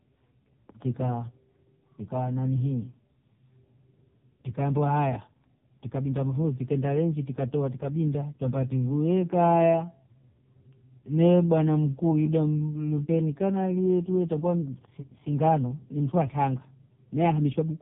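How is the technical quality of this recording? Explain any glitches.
Pretty rough, honestly. Two problems stand out.

The whole clip runs through the AMR narrowband mobile codec, and heavily. Nothing gets above about 3.8 kHz, and the speech comes out buzzy and synthetic, which fits a very low mode of around 5 kbps.

From 8.72 to 14.0 s, after "rengi tikatoa tikabinda twambia" and up to "tuita kwani singano ni", there's a time-stretched section. It plays at 0.667× speed with the pitch unchanged, so it drags. That's likely from software repeating short pieces to stretch the audio.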